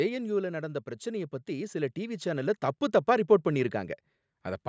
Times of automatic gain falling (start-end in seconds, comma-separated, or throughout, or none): 0.05-0.79